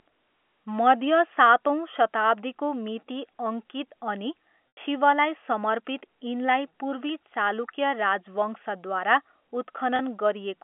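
Speech carried over a narrowband telephone line, where G.711 coding confines everything to roughly 250 Hz to 3.4 kHz. It has two dropouts from packet loss with pitch repetition, at 4.72 to 4.77 s and 9.96 to 9.99 s. These fit about 90 ms and 30 ms of lost audio, roughly three packets and one. In each gap the receiver loops the last pitch cycle, so the sound briefly holds with a buzzy quality. On a waveform this shows as identical repeating cycles tapering in amplitude. On a spectrogram it appears as flat, unchanging harmonic stripes before the speech resumes.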